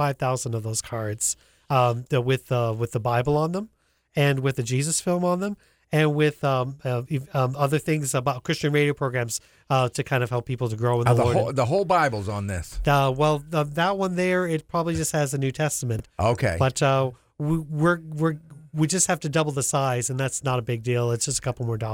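At 15.96 to 16.0 s, chunks out of order: one 10 ms chunk plays three chunks late, after audio meant to follow it. Nothing is lost, but this brief moment sounds jumbled. The waveform shows three hard joins, and the spectrogram's pattern breaks abruptly at each.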